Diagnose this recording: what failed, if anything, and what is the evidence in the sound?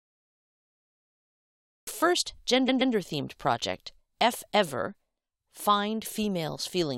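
Cut-off start: digital silence runs to 1.87 s, then speech begins abruptly mid-sound with no attack. The recording at the storage stage began late.

Repeated frames at 2.68 to 2.93 s, just before "themed project": a 128 ms block plays two extra times, stuttering and adding 256 ms. Duplicated codec frames were rewritten.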